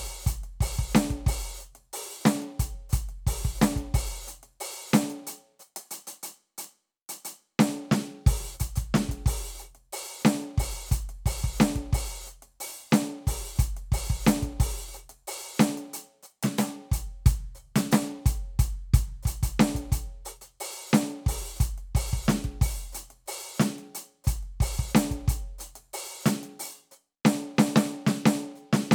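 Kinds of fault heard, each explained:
Bit error spike: a single bit flipped in memory or on a digital link, throwing one sample at 14.60 s and a run of three at 6.64 s off by a power of two before snapping back, so the music carries two sharp, broadband ticks unrelated to it.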